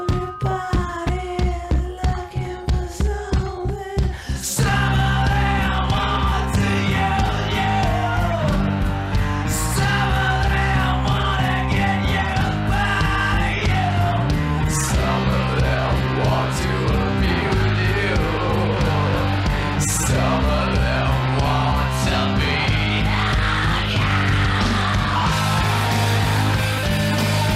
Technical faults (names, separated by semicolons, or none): none